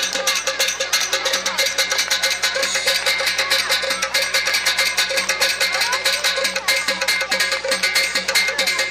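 A steady, raspy mains buzz runs under the sound for the whole clip, sitting roughly 30 dB below it. Spikes from a dimmer, rectifier or missing shield stack harmonics of 60 Hz up into the kilohertz range, which makes it coarser than a smooth, low hum.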